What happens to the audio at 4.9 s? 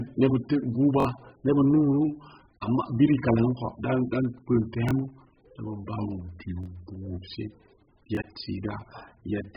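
Between 4.89 and 4.91 s there is a repeated buffer: a slice of about 21 ms plays twice in a row, with a hard join where the copy begins. The length fits a 1024-sample buffer that the device replayed because fresh audio arrived late, and roughly 20 ms of the real signal is lost. The repeat is so short that it sounds like a click or a brief buzz rather than an audible stutter. A plain dropout would leave a gap of silence; here the same material sounds again.

Across that moment, as through the whole clip, the speech is dull and smeared, with nothing above 5 kHz and a warbling, fizzy texture on sustained sounds and sibilants. That is likely heavy AAC compression, consistent with AAC-LC at a very low rate around 8 kbps, where the lowered cut-off and holes in the spectrum make the artefacts. Simple low-pass filtering would make the sound dull too, but it would not produce the warble.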